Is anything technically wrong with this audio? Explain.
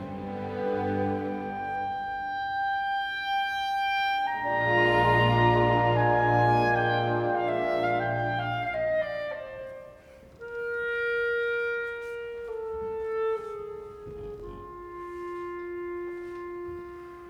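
Yes. At 14.40 s there is a block of digital silence lasting about 2.2 ms. A short run of samples drops straight to zero and then resumes, with no fade at either edge. The usual reason is that the output buffer was not filled in time, so the gap is written as zeros. Because the waveform jumps to zero and back abruptly, each edge produces a discontinuity. At this length the two edges merge into a single sharp tick rather than an audible hole in the sound.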